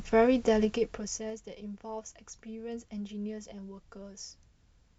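From 0.60 to 1.45 s the speech gets turned down about fifteen dB in 2 dB jumps, around ten a second, so you hear zipper noise ticking along under the fade.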